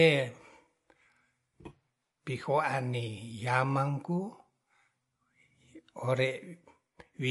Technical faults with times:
0.00-7.30 MP3 compression

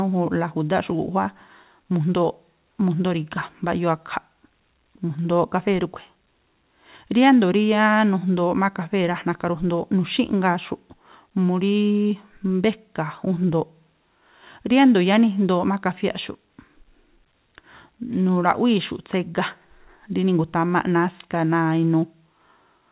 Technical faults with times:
none

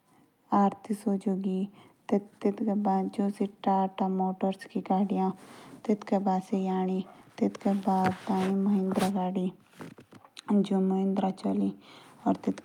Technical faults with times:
none

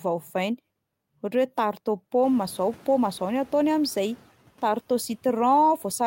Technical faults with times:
2.22-4.18 noise suppressor catching up

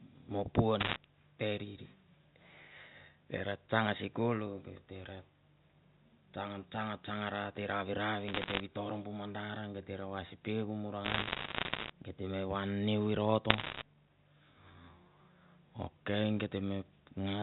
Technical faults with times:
0.80-0.96 bit errors on a digital phone line
8.28-8.60 bit errors on a digital phone line
11.05-11.90 bit errors on a digital phone line
13.50-13.82 bit errors on a digital phone line

